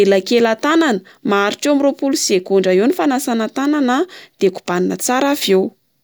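No technical faults can be heard in the recording; the speech signal stays intact and steady throughout.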